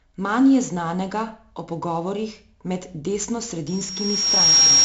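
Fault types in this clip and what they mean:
4-bit ADPCM compression: heavy gritty hiss that tracks the speech level and a dull top with nothing above 7.7 kHz, from coarse 4-bit predicted steps, fitting 64 kbps.
loudspeaker feedback squeal: a 5.6 kHz tone swells over about a second from 3.67 s to the end, ending about 10 dB above the speech, as the microphone re-amplifies its loudspeaker.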